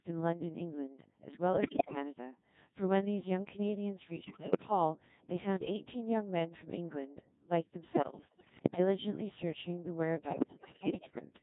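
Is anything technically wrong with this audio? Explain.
Yes. The whole speech clip has been through a Codec 2 vocoder at 1.6 kbit/s, with heavy damage. Codec 2 keeps only pitch, voicing, energy and a coarse spectral envelope, then rebuilds the voice from sine waves, so the original waveform is gone. The result is robotic and buzzy. On a spectrogram, the harmonics look unnaturally regular and smeared, with blurred formants and no fine noise detail. The waveform looks synthetic rather than like the recorded shape.

Bit errors on digital voice radio corrupt four stretches: 1.53 to 1.95 s, 4.24 to 4.62 s, 7.92 to 8.79 s and 10.28 to 11.25 s. The error rate is high in three of them and roughly half as high in the third. At this low bitrate, each flipped bit changes the pitch, level, voicing or spectrum of a whole frame. The voice therefore jumps in pitch and loudness and turns into bleeps, warbles and gibberish. 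A spectrogram shows harmonic stacks leaping frame to frame, and the waveform shows abrupt level steps.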